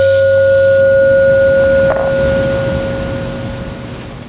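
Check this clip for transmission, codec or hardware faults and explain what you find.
There is one fault, gain pumping, and it runs through the whole of this music clip.

Gain pumping, throughout: The likely cause is input gain set far too high for the microphone, with a fast limiter or compressor dragging the level down each time the music gets loud. The gain swings by around 20 dB. Loud and quiet moments sit close together, so the music sounds squashed. The call path's narrow band, with nothing above 4 kHz as a 64 kbps G.711 mu-law link would give, is heard but is not part of the fault.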